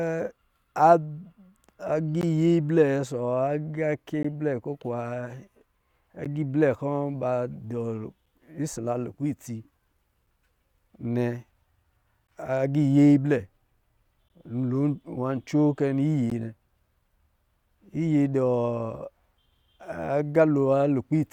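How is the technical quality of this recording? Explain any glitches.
The recording has a recurring glitch: eight brief holes of silence interrupt the speech at regular two-second intervals.

These are gaps between stream segments, at 2.21, 4.23, 6.25, 8.26, 10.26, 12.27, 14.29 and 16.30 s. Each two-second segment's timestamp starts slightly after the previous one ends, and the player fills that space with silence, producing hard-edged cuts of about 6 to 16 ms. Unlike a packet dropout, nothing is removed. The speech resumes exactly where it stopped, just pushed a little later.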